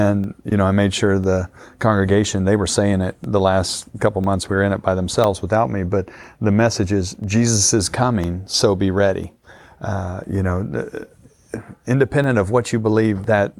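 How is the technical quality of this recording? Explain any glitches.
The speech is marred by periodic USB or driver dropouts. From 0.24 s to 13.24 s, a tiny piece of audio vanishes once every 1.0 s. Each gap is about a millisecond long and is filled with silence. Something is stalling the USB bus or the audio driver on a fixed schedule. The stream briefly starves each time. You hear a regular tick or small pop, and only while sound is present.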